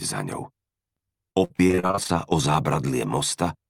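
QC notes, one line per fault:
1.31–2.11 s, repeated packet loss (robotic sound): choppy, with pieces dropping out. Around a dozen short holes, none longer than about 50 ms, were each patched by stretching the preceding sound, so roughly 40% of this stretch is repeated filler rather than real audio.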